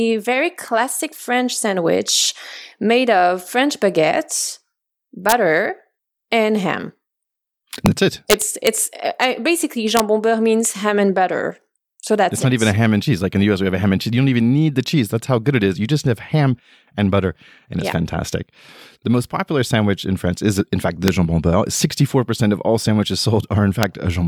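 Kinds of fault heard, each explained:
Integer overflow: Loud peaks pushed past the largest value the number format can hold. Instead of being limited, they wrapped round to the opposite extreme. Each one is heard as a violent crack in the speech, far harsher than clipping. They come at 5.29 to 5.32 s, 7.86 s, 8.30 to 8.67 s, 9.97 to 10.00 s (just before "beurre means ham and"), 21.08 s and 23.83 s. The peaks went only about 0 to 2 dB over the limit, yet still flipped sign.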